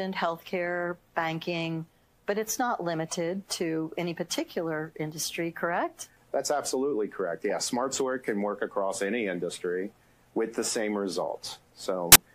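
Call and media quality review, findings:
File tags played as audio, 12.12–12.16 s, near end of file. Symptom: abrupt 33 ms burst of harsh static with hard onset and cutoff. Probable component: file parser/decoder reading the embedded cover-picture block as samples. Compressed image bytes behave like random values, so the result is very loud white noise. Waveform: dense rectangular block. Spectrogram: flat broadband vertical slab spanning all frequencies, square edges.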